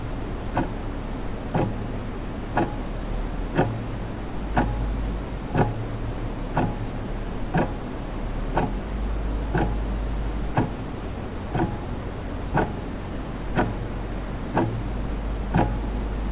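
No faults are audible; the sound carries the band-limiting of the WebRTC call path, with nothing above 4 kHz, which fits a G.711 A-law link at 64 kbps.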